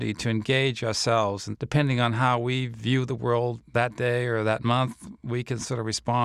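No technical faults are audible.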